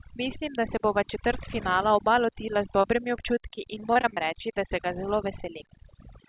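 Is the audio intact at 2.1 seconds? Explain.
No, overdone noise removal runs through the whole clip, so 2.1 s is hit too: bands near the noise floor get gated off, taking quiet parts of the speech with them and leaving twinkling, warbling near-silence behind the voice.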